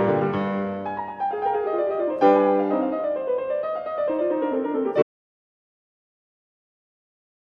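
At 5.03 s the music stops dead and never returns: an audio dropout to silence that runs through to the end, roughly 2.45 s of silence. There is no fade and no residual room tone, so the input was likely lost upstream, through a disconnect, failed link or mute, while recording carried on. On a waveform the trace collapses abruptly to a flat line; on a spectrogram every frequency band goes uniformly black from that moment.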